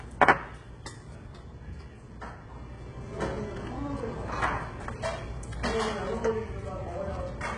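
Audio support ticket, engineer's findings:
Whole clip: treble bright but synthetic and grainy, heavy coding damage, nothing above 11 kHz. Likely HE-AAC compression at a very low rate, consistent with about 12 kbps; spectral band replication copies lower bands upward, so rebuilt treble harmonics misalign.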